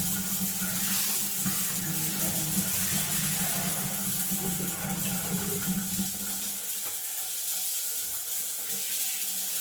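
A recording of everyday sound with plainly audible Opus compression damage from start to finish. Tones come out rough, grainy and noisy rather than clean. The highs still reach about 20.2 kHz, so the band has not narrowed. This likely comes from Opus in its music mode at a low bitrate, around 16 kbps. Short of bits, the encoder keeps each band's energy but fills the detail with folded or noise-like content. That is the source of the grit.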